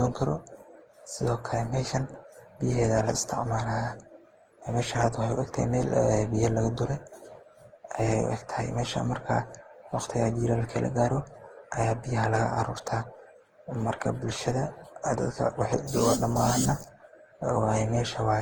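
Throughout the speech, the sound is swirly, smeared and hollow, with consonant attacks blurred, which is the signature of generation loss. This is most likely repeated lossy re-encoding, roughly ten passes through a codec whose character points to Opus at around 48 kbit/s. Each pass quantises again on a shifted frame grid, so the errors pile up. A spectrogram would show smeared transients, with nothing above 20.1 kHz.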